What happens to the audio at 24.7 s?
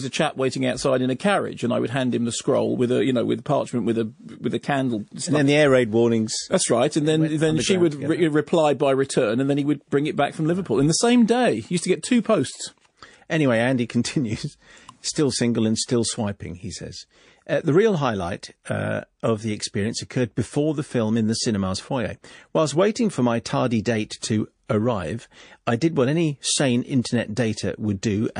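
Pre-echo from 24.66 to 24.69 s, between "my tardy date to" and "arrive I did what": a hiss about 18 dB up smears 31 ms ahead of the attack. The long transform block, fitting roughly 52 ms with no switch to short blocks, spreads its noise before the onset. This sits within MP3 compression throughout, likely at about 40 kbps, with plainly audible watery, swirly smearing.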